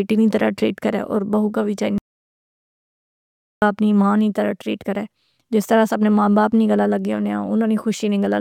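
A speech recording with an audio dropout to silence from 1.98 s to 3.62 s: the sound cuts off right after "بہو کا وی" and returns mid-flow at "اپنی ماں نیں طرح", with about 1.64 s of speech lost. The gap is dead silence, with no room tone or noise floor. That sets it apart from a natural pause or a noise gate closing. The likely cause is a lost input or stray mute while the recorder kept writing silence.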